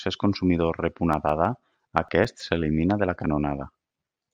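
Right after "consumidor rep", from 1.13 to 2.56 s, there's a run of CD scratch ticks, ten of them at about seven a second, each a few milliseconds long. A blemish is wiping out more data per rotation than error correction can rebuild, so the player patches the gap. The ticks stop before "de la".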